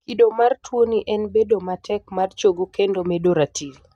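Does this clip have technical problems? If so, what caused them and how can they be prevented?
No, nothing stood out as a technical problem on listening to this speech clip, so there is nothing to trace back or prevent.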